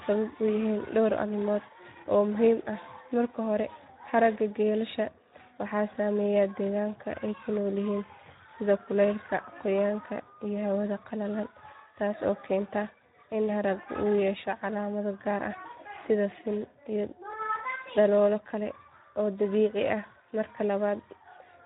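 The whole clip carries plainly audible Speex codec damage: the speech sounds hoarse and noisy, because the codec has too few bits to model the excitation properly. That degree of roughness fits a setting around 11 kbps.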